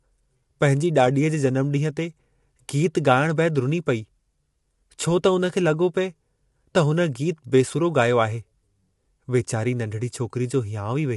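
Low-delay AAC compression runs through the whole clip, from start to finish. The speech has plainly audible coding damage and nothing above 11.6 kHz, which points to a video-call codec such as AAC-ELD at around 32 kbps. The likely cause is its short frames: they describe pitch harmonics coarsely, so the voice sounds rough and grainy, with noise filling the gaps between harmonics and a dull, cut-off top.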